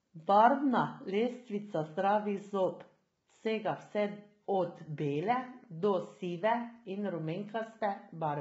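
A speech clip likely passed through low-delay AAC compression, the AAC-ELD kind used on video calls, at what sounds like a very low bitrate. At that bitrate, throughout the voice is rough and grainy with noise between harmonics, and nothing remains above 7.7 kHz.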